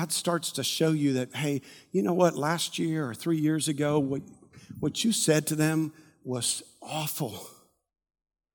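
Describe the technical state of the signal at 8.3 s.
At 8.3 s the speech signal is intact, with no audible dropout, clipping, distortion or other fault at that moment.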